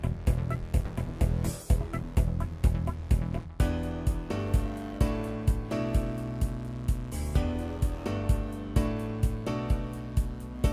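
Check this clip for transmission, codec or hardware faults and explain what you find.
Nothing stood out on listening to this clip.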